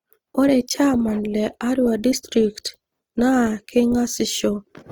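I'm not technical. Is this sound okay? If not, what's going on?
No. The speech sounds grainy and rough throughout. That is likely Opus compression, which swaps fine detail for noise to save space.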